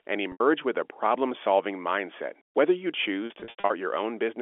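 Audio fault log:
0.32 to 0.40 s, packet loss with pitch repetition: an 80 ms gap, which fits four 20 ms packets going missing. The receiver filled it by looping the last pitch period and fading it down, so the sound briefly hangs on a held, slightly buzzy tone before picking up again.
3.26 to 3.70 s, packet loss with pitch repetition: about 260 ms lost in bits scattered across 440 ms, the longest run 80 ms. Each gap gets the same looped-period patch, so the audio stutters and buzzes in short bursts against the narrow 300 Hz to 3.5 kHz telephone band of the G.711 line.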